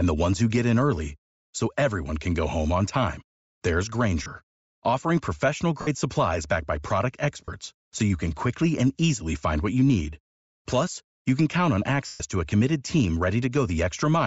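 Bluetooth LC3 compression runs through the whole clip, and its damage is plainly audible. The speech has a breathy, grainy edge, and the upper band sounds thinned and filled with hiss instead of real detail. This is likely LC3 coding at a low rate, which fits about 32 kbps with 10 ms frames. At that rate the encoder zeroes much of the high spectrum, and the decoder fills the gaps with noise.

Lost LE Audio frames break in at 4.23 s for 30 ms, 5.81 s for 60 ms, 7.46 s for 30 ms and 12.06 s for 140 ms. In each gap the decoder replays the last received spectrum with scrambled signs, so the speech smears into a brief noisy blur. The 140 ms loss at 12.06 s runs long enough for that concealment to fade toward silence before the audio returns.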